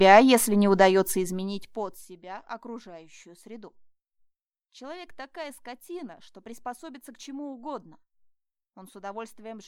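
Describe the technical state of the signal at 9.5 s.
At 9.5 s the signal is intact, with no fault present at that point.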